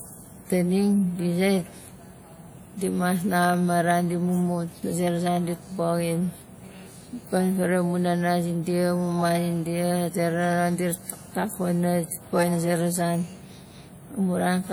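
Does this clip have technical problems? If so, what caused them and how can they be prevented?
Yes. Throughout, the speech sounds ringing and washy, with hiss that breathes alongside it. This is likely WMA compression at a low bitrate, around 48 kbps. Encode at a higher bitrate, or keep the speech in a lossless format.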